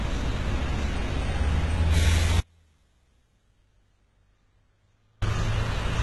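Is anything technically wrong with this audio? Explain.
Yes, there are two faults. Throughout, the treble sounds gritty and metallic, with nothing above 11.8 kHz. This is likely heavy HE-AAC compression, with rebuilt treble that fits a very low bitrate of around 16 kbps. From 2.40 to 5.22 s, the sound cuts abruptly to a faint leak about 40 dB down for 2.82 s. This is likely an audio dropout to a faint residue.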